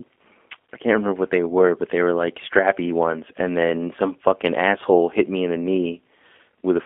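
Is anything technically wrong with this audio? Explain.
Yes. Throughout, the speech has passed through a G.729 codec, which fits an 8 kbit/s line. It rebuilds each frame from a vocal-tract filter, pitch predictor and sparse pulses, leaving only 250 Hz to 3.5 kHz, so the speech sounds narrow, plainly rough and synthetic.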